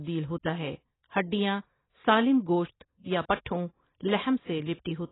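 AAC compression runs throughout this speech recording: nothing is heard above about 3.9 kHz, and the dull, smeared, warbling sound likely comes from AAC-LC coding at a starved bitrate, consistent with roughly 16 kbps.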